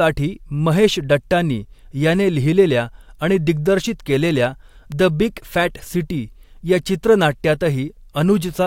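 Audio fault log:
4.92 s, electrical switching spike: a sharp snap or tight cluster of clicks lands on top of the speech, reaching about -15 dBFS. Its likely cause is a nearby switch, motor or static discharge arcing briefly and coupling into the audio line, which is why it cuts through the sound instead of blending with it. On a waveform it is a narrow vertical spike, and on a spectrogram a thin full-height stripe.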